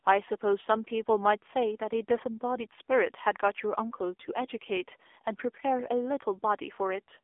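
From start to finish the speech sounds thin, boxed-in and plainly buzzy, with a synthetic edge on every syllable and no air or sibilant brightness above about 3.6 kHz. The bass below 300 Hz is missing too, leaving a telephone-line band of roughly 300 Hz to 3.5 kHz. This is the AMR narrowband mobile codec at work: it samples at 8 kHz and rebuilds the voice from a vocal-tract model driven by sparse pulses. The plainly audible damage points to one of its lower modes, around 7.4 kbps.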